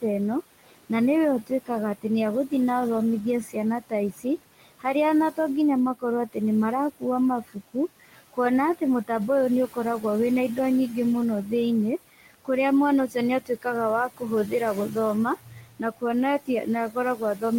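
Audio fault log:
throughout: noise suppressor artifacts. The suppressor judges which frequency bands hold steady noise frame by frame and pulls them down by about 18 dB, so the room noise, which sits about 17 dB below the speech, drops away in the gaps and swells back under each phrase.
0.01–0.91, 1.47–2.52, 3.43–5.38, 5.95–6.36, 6.91–9.10, 9.68–10.58, 12.17–12.49, 13.08 to the end: speech cut by the noise suppressor. Here the suppressor mistakes parts of the speech for noise and turns them down with the background, by about 16 to 18 dB at the deepest. Soft consonants, word endings and quieter stretches sound swallowed or faint. Each span up to 12.49 loses only a fraction of a second in all, with the 3.43–5.38 stretch hit hardest at close to three quarters of a second.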